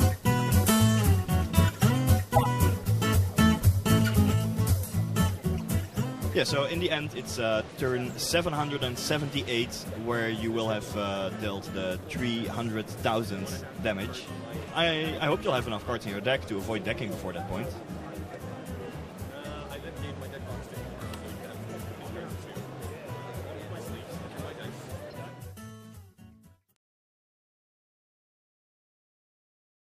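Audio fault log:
2.35–2.46 s, 25.08–25.13 s, 26.70 s: corrupt frame decoded. Damaged compressed frames were played anyway, spraying energy at wrong frequencies. The first blip is loud, the later ones quieter and faint. A spectrogram shows brief vertical smears, and the waveform shows short spiky bursts.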